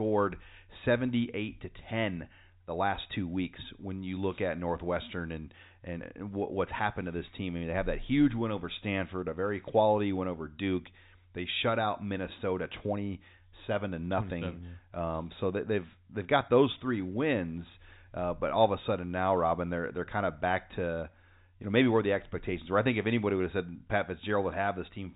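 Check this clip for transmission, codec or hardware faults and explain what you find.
No transmission, codec or hardware fault can be heard in this speech; the audio carries the band-limit of ordinary G.711 A-law telephone coding, with nothing above about 3.8 kHz, as the telephone path normally leaves it.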